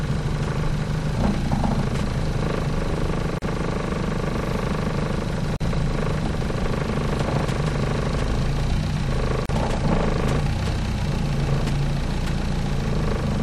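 The audio drops out briefly three times, at 3.38, 5.56 and 9.46 s, each a hole of about 36 to 40 ms, and then picks up right where it left off. That's a gap at a join of encoded pieces: separately encoded chunks were stitched together with each one's start-up silence and end padding left in, so the edges sound abrupt but slightly softened.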